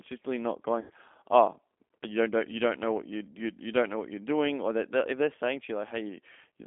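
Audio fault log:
Throughout: G.729 codec at 8 kbit/s rebuilds speech from a filter, pitch predictor and sparse pulses, leaving a rough, synthetic 250 Hz to 3.5 kHz band.
0.80 to 0.92 s: VoIP packet loss concealed by the speech codec. About 100 ms went missing, so the decoder stretched its last frame into a fading buzzy tone or coloured noise.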